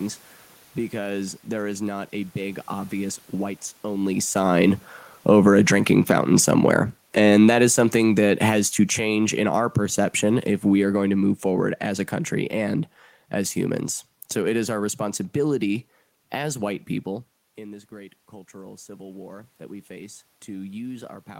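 Speech with two automatic gain faults. Automatic gain falling runs from 4.34 to 11.77 s, between "big obvious whites only" and "as a country and": the control pulls gain down by about 12 dB, so the room noise sinks with the voice. That shared drop distinguishes it from the talker moving near 4.0 s, which changes only the voice. Automatic gain rising starts at 18.51 s and lasts to the end. After the input fell by about 18 dB, the control slowly raises the gain and the background swells with the speech. The talker's shift around 17.0 s changed the voice alone.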